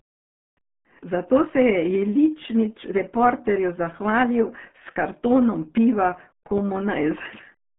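Throughout, the speech carries RealAudio 14.4 codec damage. Nothing passes above 3.6 kHz. Heavy low-rate coding, fitting an 8 kbit/s stream, leaves it muffled and gargly.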